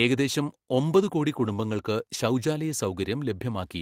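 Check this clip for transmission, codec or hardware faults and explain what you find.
One transmission fault: a lost packet rebuilt from error correction, from 1.35 to 1.57 s, right after "ഏകദേശം ഒമ്പതു കോടി". Packets went missing, and the decoder played the low-bitrate copies carried in the following packets. There's no gap, but that stretch sounds rougher and noisier.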